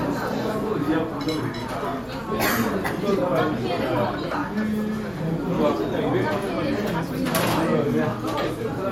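A recorder working in 4-second chunks likely drops a sliver of audio each time it hands over to the next block. At 2.88 s and again at 6.87 s, around 10 ms of sound is missing between chunks, and the two sides butt together as a brief, abrupt skip.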